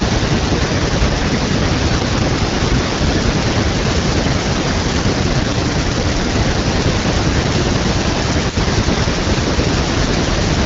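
From the start to 2.14 s there is an echo leak: a delayed copy of the speech trails the original by 339 ms, at about 15 dB below it. It sounds like a delayed repeat of the voice. The likely cause is a far-end loudspeaker whose echo canceller let part of the microphone pickup through and sent it back down the line.

Between 0.29 and 1.32 s the speech is suppressed in double talk. The talker's level sinks by roughly 10 dB in patches while the echo is present. This is likely the canceller attenuating everything once it could no longer tell the talker from the returning echo.

The echo leak returns at 2.31 s and lasts to the end, again 339 ms behind and now louder at about 10 dB below the speech. The repeat is easier to hear, giving a doubled quality.

From 2.01 to 7.49 s a second stretch of double-talk suppression is heavier. Dips reach about 15 dB and cover around 4 s of that span. The speech fades and thins in chunks.

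From 5.23 to 6.34 s an AMR rate drop takes the AMR-WB codec from 12.65 to 8.85 kbit/s. The bandwidth stays the same and there is no gap, but the speech turns rougher and more synthetic until the rate recovers. At 12.65 kbit/s outside that window, the codec leaves only light coding texture.

From 8.03 s to the end, double-talk suppression pulls the speech down by about 10 dB in places, over roughly 2 s in total.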